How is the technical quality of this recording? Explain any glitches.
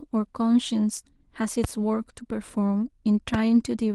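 Two loud pops break into the speech, one from 1.64 to 1.67 s and a stronger one from 3.34 to 3.37 s. Each is a single sharp crack that stands roughly 10 dB and then roughly 15 dB above the speech, with the talking continuing underneath. The likely cause is a brief electrical pulse, such as a static discharge, a switch or connector contact, or a driver hiccup, entering the signal chain and being shaped by the circuits after it. The speech also carries light Opus voice coding.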